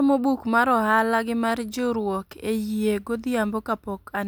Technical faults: none

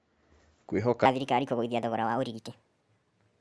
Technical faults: wrong sample rate

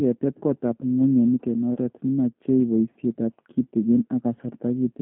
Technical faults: G.729 codec; VoIP packet loss concealed by the speech codec

